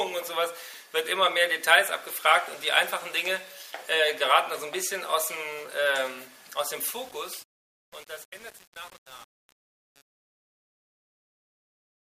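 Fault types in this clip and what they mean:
Truncation distortion on a fade: the fade-out keeps only about 7 bits without dither, so from 6.75 s the tail coarsens into square steps and gritty distortion, visible as stair-stepped waveform and broadband spectrogram grit.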